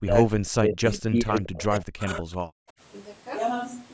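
From the start to 2.3 s the speech keeps dipping and breaking up. Words thin out, lose their top end or vanish in fragments, with the deepest cuts falling around 40 dB, adding up to about two seconds of damaged speech. The likely cause is speech suppressed in double talk: both ends were talking together, and the echo canceller, unable to tell this talker from the loudspeaker's echo, pulled down everything it heard.

At 1.35 s, lasting until 1.41 s, a brief faint ghost of the voice appears, sitting roughly 25 dB below the speech and trailing it by 160 ms. This is likely an echo leak. One side was playing the call over a loudspeaker, its microphone picked that sound up, and its echo canceller failed to remove all of it, so a delayed, weak copy of the voice was sent back down the line.

From 2.58 s to 2.76 s the room sound briefly falls away, a hole of about 40 dB lasting roughly 150 ms, before the ambience returns. 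This is background gated by the echo canceller. While the loudspeaker was active, the canceller clamped the microphone hard to keep echo out, taking the background noise with it, and released once it judged the danger over. The call's microphone processing shows in a spectrum that stops at 8 kHz.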